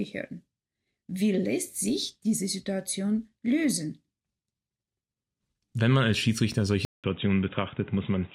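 The input likely switched to a poorer device at 6.85 s: after a gap of about 0.19 s, the speech continues to the end with nothing above 3.8 kHz, sounding dull and boxy, at much the same level, over a faint new background noise.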